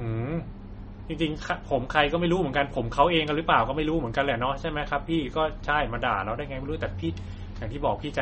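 Throughout, a bit-starved encoder, likely MP3 compression at a rate fitting 32 kbps, removes everything above 8.4 kHz, leaving the speech dull and plainly watery.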